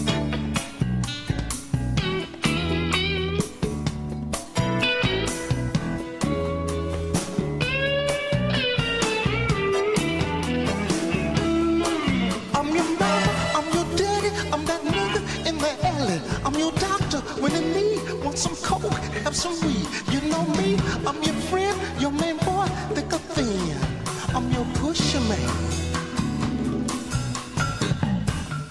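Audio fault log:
No faults heard anywhere in this recording.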